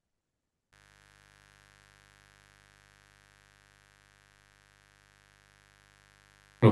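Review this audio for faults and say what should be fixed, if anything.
Mains buzz runs from 0.72 s to the end of the speech: a raspy 50 Hz buzz roughly 25 dB below the voice. Sharp switching spikes twice per mains cycle, from a dimmer, rectifier or unshielded cable, spread harmonics into the kilohertz range. To prevent it, use shielded, balanced cabling and keep the recording chain away from dimmers and switching supplies.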